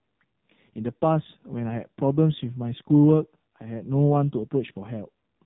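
From start to finish the speech sounds buzzy, thin and synthetic, with everything above about 3.8 kHz gone, so consonants lose their crispness and the voice takes on a hollow, telephone-like quality. This is the AMR narrowband mobile codec, heavily degraded. It samples at 8 kHz and rebuilds speech from a vocal-tract model driven by sparse pulses in short subframes. The heavy damage points to one of AMR-NB's lowest modes, around 5.9 kbps.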